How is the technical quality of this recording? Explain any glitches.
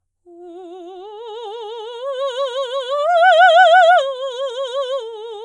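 The technical quality of the music recording holds up, and there are no glitches to explain.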